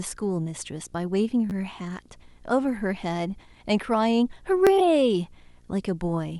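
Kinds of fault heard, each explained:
Video or display buzz: a screen or video cable couples into the audio, adding a buzz at the 59.94 Hz field rate with hash above it, about 35 dB below the speech throughout. The rasping, harmonic-rich character sets it apart from smoother mains hum.
Repeated buffer: late audio made the device replay its last block, about 11.6 ms long, which fits a 512-sample buffer. It played twice more from 1.50 to 1.52 s and once more at 4.67 s, heard as brief buzzy stutters with hard joins. Unlike a dropout, no audio goes missing.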